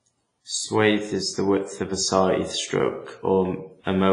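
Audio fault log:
throughout WMA compression: ringing, washy speech, hiss breathing with the signal, nothing above 10.6 kHz; likely a WMA encode near 24 kbps smearing quantisation noise.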